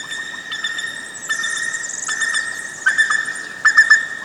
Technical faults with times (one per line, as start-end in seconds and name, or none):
0.00-4.25 wrong sample rate